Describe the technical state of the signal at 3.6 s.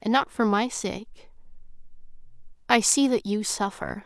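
At 3.6 s the audio is intact, with no dropout, distortion, glitch or other technical fault to be heard.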